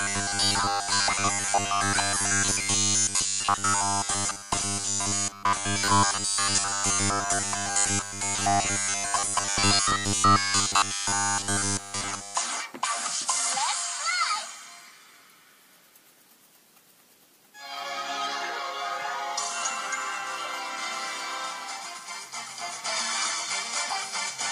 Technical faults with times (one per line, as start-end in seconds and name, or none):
0.01-12.35 robotic sound from repeated short buffers